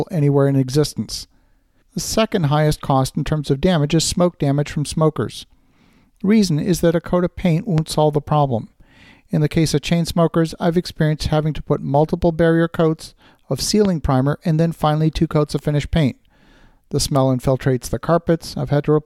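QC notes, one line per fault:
7.78–7.80 s, loud pop: a single sharp pop lands between "a coat of paint" and "solve the problem", peaking roughly 10 dB above the speech. It is likely a voltage pulse from a plug, switch or static discharge. Unlike a dropout, the speech carries on underneath without a gap.
13.85–13.87 s, loud pop: the same kind of single pop, again roughly 10 dB over the speech, falls between "multiple barrier coats of" and "primer and then finally". Its thump is added on top of the signal, not cut into it.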